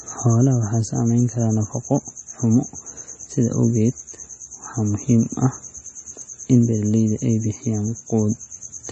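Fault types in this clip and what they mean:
MP3 compression: Throughout the speech nothing sounds above 8.4 kHz, and weak detail flickers with a watery, swirly quality, which points to a low bitrate around 32 kbps, likely from MP3 encoding. A plain low-pass filter would only dull the sound without this warbling.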